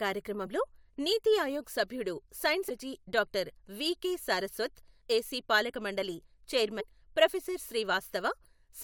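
A speech clip with four short bursts of damaged data in the compressed stream: at 0.45 s, just before "నీతి ఆయోగ్ సభ్యుడు సైన్స్", at 2.68–2.70 s, right after that phrase, at 5.00 s and at 6.79–6.81 s. Corrupted bytes make the decoder misread frames and lose sync, so each spot is a brief glitch while it searches for the next frame header.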